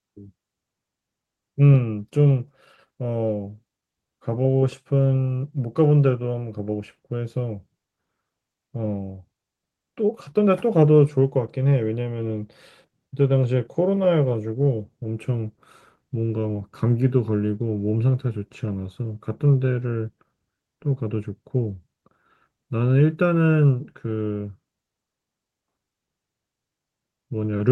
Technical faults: none

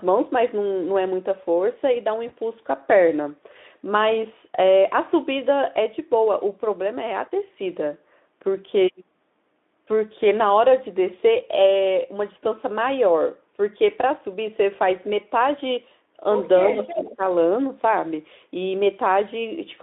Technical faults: VoIP packet loss concealed by the speech codec; echo leak; speech suppressed in double talk

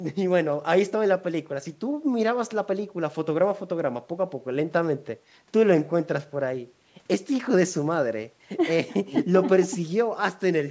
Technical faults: none

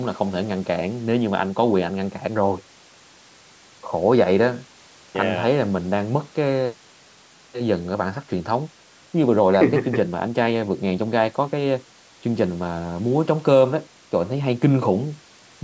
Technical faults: none

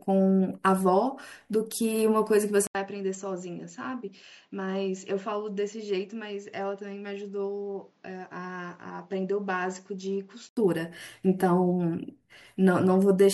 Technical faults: input switched to a poorer device

